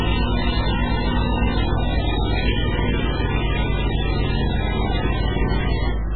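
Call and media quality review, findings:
Watery, swirling texture across the whole clip, treble gone above 4.4 kHz, transients smeared, heavy warbling on weaker detail. Likely MP3 compression, bit-starved, which fits a very low bitrate near 8 kbps. Encoder cuts the band at a fixed ceiling and drops quiet frequency lines frame to frame, so residual content flickers on and off.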